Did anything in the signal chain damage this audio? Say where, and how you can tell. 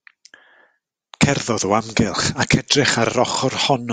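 No, nothing in the chain audibly damaged this speech.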